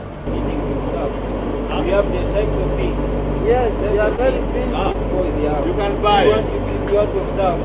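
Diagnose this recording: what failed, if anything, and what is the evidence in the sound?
Short concealed packet loss in the network stage: about 20 ms of audio failed to reach the decoder in time on two occasions, at 4.16 s and again at 4.92 s. In each case the receiver covered the gap by extending the preceding sound and then crossfading back into the real signal, so each event is heard as a brief smear or wobble. The sound is capped at 4 kHz, which fits a G.711 narrowband call path.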